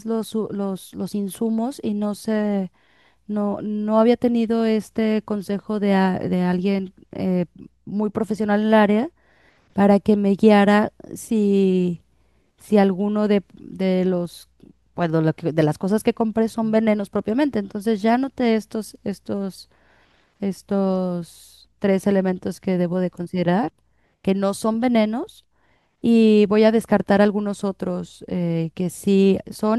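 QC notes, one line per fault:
Nothing to flag on this one, the speech comes through without any technical problems worth noting.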